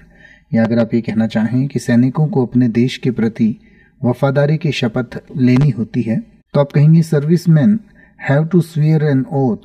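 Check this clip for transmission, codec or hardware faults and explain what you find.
Two faults are present: comb filtering across the whole clip, and two pairs of loud pops.

The channel delay (comb filtering) runs from start to finish. One channel trails the other by around 5 ms, and when the two are summed to mono, shared content cancels at regularly spaced frequencies. The first notch sits near 100 Hz, with further notches repeating up the spectrum. The result is a hollow, phasey, thinned sound. Unlike a flanger or a codec artefact, the notches never move, so the coloration stays constant.

Loud pops occur twice, each as a quick double hit: once between 0.65 and 0.83 s, and again between 5.56 and 5.65 s. Each peaks about 10 dB above the surrounding audio. A sudden voltage step or pulse, likely from a connector, a switch or a driver glitch, has been added to the signal, and the downstream circuitry shapes it into a sharp thump. 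The audio continues uninterrupted beneath both pops, which distinguishes them from dropouts or clipping.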